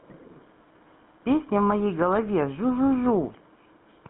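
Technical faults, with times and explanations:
Throughout, GSM full-rate codec: the speech passes through a narrow band of about 150 Hz to 3.6 kHz, so the low warmth and all upper sibilance are missing. The codec models the vocal tract as a filter and excites it with a coarsely decimated pulse train, so the voice takes on a buzzy, gravelly roughness and plainly audible grain, consistent with early 13 kbps mobile telephony.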